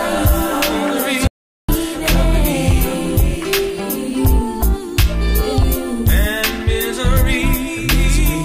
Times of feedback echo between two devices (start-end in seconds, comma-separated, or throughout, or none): none